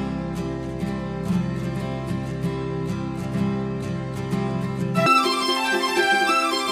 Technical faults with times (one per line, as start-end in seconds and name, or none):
5.06-6.72 audio read two samples at a time (double speed)